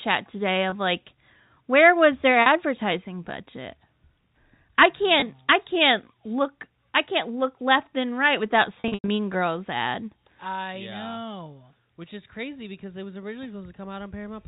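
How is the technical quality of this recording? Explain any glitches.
The recording has four dropouts, all caused by packet loss with pitch repetition. The sound travels over G.711 telephone coding, so it is band-limited to 4 kHz.

The network dropped audio at 0.70–0.72 s (just before "like where was their"), 2.42–2.46 s (right after "like where was their"), 5.20–5.22 s, and 8.80–9.08 s (after "left and right without"). The receiver filled each gap by repeating the last pitch period and fading it out. The 20 ms losses, each fitting a single packet, and the 40 ms loss come across as a brief buzzy hold on the sound. The last event is different: 200 ms of audio goes missing across 280 ms, with the longest stretch at 100 ms. There the repetition fades fully to silence before the sound cross-fades back in, so it is heard as a gap.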